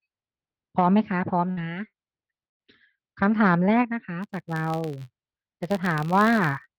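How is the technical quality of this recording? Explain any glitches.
The recording has two kinds of technical fault: three bursts of packet loss early on and a block-rate buzz in the second half.

Burst of packet loss at 1.51 to 1.60 s, 1.87 to 1.96 s and 2.47 to 2.62 s: the receiver stretched the last received sound for about 54, 60 and 119 ms, fading it out, so each gap is a brief held buzz or hiss. The third fades to near-silence for about 110 ms. Speech then resumes with about 60, 60 and 120 ms missing.

Filter restarted on every block from 4.23 s to the end: the filter loses its state at each block boundary and restarts from zero. Each restart adds a small click, producing an 86.1 Hz buzz, which fits 512-sample blocks, that rises and falls with the speech level.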